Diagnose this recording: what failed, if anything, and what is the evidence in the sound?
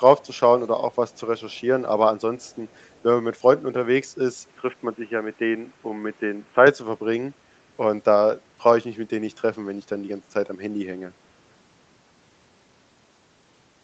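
Echo leak, most likely from the far end's echo canceller, at the call-processing stage. A faint delayed copy of the speech, about 35 to 40 dB down, trails by 331 ms at 0.19 to 0.4 s, 0.92 to 1.2 s and 2.39 to 3.03 s. The loudspeaker pickup was not fully cancelled.

Input switched to a poorer device, likely at the driver or device stage. From 4.48 to 6.67 s the band narrows, so the sound turns dull. A new noise floor appears, roughly 35 dB below the speech. There is no gap and no level jump at either switch.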